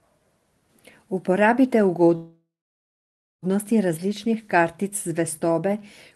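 From 2.15 s to 3.45 s the speech stops and a call audio freeze fills the space, likely because packets stalled in transit and the jitter buffer ran dry. The last sound carries on as a brief fading buzz, then about 0.94 s of near-silence. When audio resumes, it picks up where it left off, now about 1.27 s late, with nothing lost. A waveform shows a short decaying tail into a flat stretch. A spectrogram shows smeared, fading bands giving way to an empty block, inside the codec's band, which tops out near 12 kHz.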